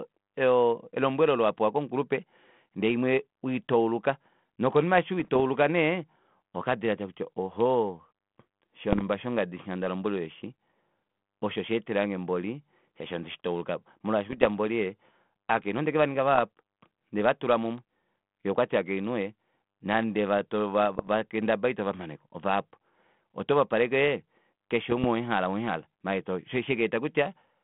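Bit errors on an ADPCM link, the 32 kbit/s G.726 kind, cause pops and rough bursts at 5.20–5.40 s (after "imwe weitauluka nokonima eshi"), 8.93–9.02 s, 14.30–14.46 s, 16.35–16.39 s, 20.96–21.08 s and 24.90–25.05 s (before "owemuhala owemuhala"). A small fraction of flipped bits corrupts the decoder's step size and predictor, so each error rings on briefly. On a waveform these show as spikes and level jumps, and on a spectrogram as broadband vertical smears within the band.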